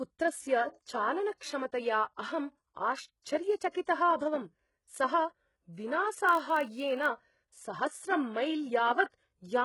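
Throughout the speech, the treble sounds bright but synthetic, with sibilants turning gritty and lispy. This is likely HE-AAC compression at a very low bitrate, around 12 kbps. The upper band is rebuilt from copied lower harmonics instead of being coded, so its harmonics don't line up with those below. Unlike plain low-pass filtering, the top still sounds present, just false.

Pre-echo appears at 1.35 to 1.41 s, 3.71 to 3.75 s and 3.85 to 3.87 s. A short hiss rises 57 ms, 36 ms and 22 ms ahead of each sharp onset, leaving the attack smeared. The codec spread its quantisation noise across a transform block that held a late transient. Because the hiss comes before the attack, it differs from a reverb tail or ringing.

From 6.27 to 7.09 s there is a block size mismatch (padded): a steady 46.9 Hz buzz underlies the sound, which fits a stage reading 1024-sample blocks that weren't completely filled. 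The unfilled part of each block was zero-padded, so a tiny gap recurs at the block rate. Playback runs only fractionally slow, at 0.999 times speed, with the timbre unchanged. Unlike mains hum, the buzz comes from silent gaps rather than from a tone added to the signal.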